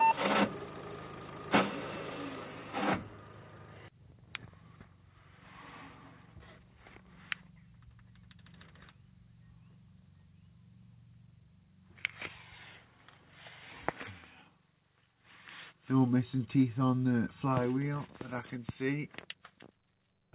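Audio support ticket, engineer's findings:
No faults found: the signal came through a WebRTC call path, with nothing above 4 kHz, which fits a narrowband telephone codec such as G.711 A-law at 64 kbps.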